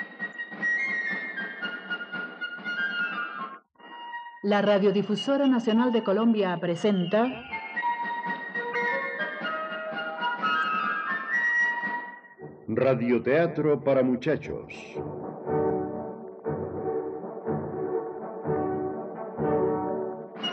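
At 0.30–0.35, 8.71–8.76, 10.60–10.64, 15.66–15.71 and 19.11–19.16 s, damaged data in a compressed stream leaves the decoder misreading frames and losing sync. Each event is a roughly 40 ms glitch, such as a chirp, squawk, click or short hole, visible as a brief disruption in the waveform.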